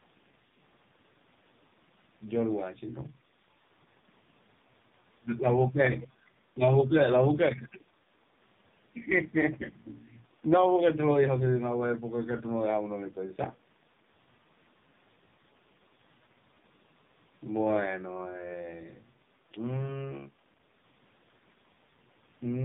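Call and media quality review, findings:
AMR narrowband mobile codec, throughout: buzzy, synthetic speech, empty above 3.8 kHz on a spectrogram with smeared harmonics. Heavy damage fits AMR-NB's lowest mode, near 4.75 kbps.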